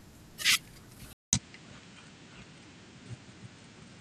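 At 1.13 s the input was likely switched to a poorer device partway through the recording, and the audio changes from that point to the end. A silence of 200 ms marks the changeover, and then the speech returns through a narrower channel with nothing above 9 kHz, so it sounds duller and less airy. The level shifts by a few decibels, and a different, faint background noise sits well below the speech.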